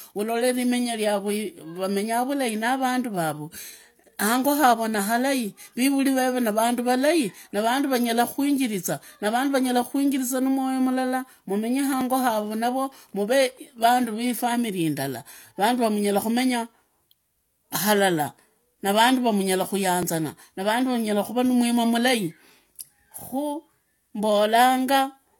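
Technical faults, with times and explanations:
12.01–12.05 s and 20.03–20.06 s, overlap between stream segments: two slight skips forward, each about 35 ms of sound missing. Both fall on 4-second segment boundaries. Adjacent segments were timestamped as overlapping, so the player discarded the supposed duplicate, which was actually unique audio. The waveform jumps across the gap. The lost stretch is short enough to register as a tiny stumble rather than a dropout.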